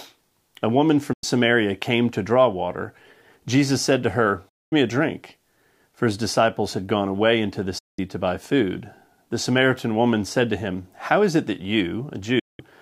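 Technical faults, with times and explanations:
1.13 to 1.24 s, 4.49 to 4.73 s, 7.78 to 7.99 s and 12.39 to 12.60 s, digital broadcast dropout: the sound dips to silence over about 8 ms and stays muted for roughly 0.1 to 0.24 s before returning further on. Each time the receiver lost the signal or rejected corrupted frames and muted until clean ones arrived. The gaps come in whole multiples of about 32 ms, which fits a lost run of frames. The audio sent during each hole is gone.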